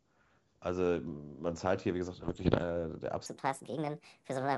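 From 2.23 to 2.64 s there's a patch of bit errors on an ADPCM link: pops and rough, gritty bursts with little jumps in level. Each flipped bit, at a rate of around one and a half percent, throws off the decoder's step size and predictor, so the damage rings on for a few milliseconds. Behind it, the G.722 wideband coding still comes through clear.

Then from 3.26 s to the end the speech runs 1.5 times too fast, with pitch up about seven semitones and the voice sounding high and hurried. It's likely a section at the wrong speed, played back against a mismatched clock.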